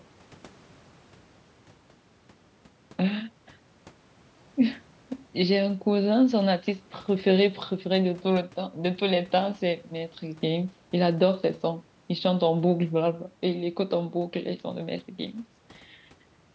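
No technical faults can be heard anywhere in the speech. The call microphone processing it passed through trims the lowest bass and leaves nothing above 8 kHz, which is how that path normally sounds.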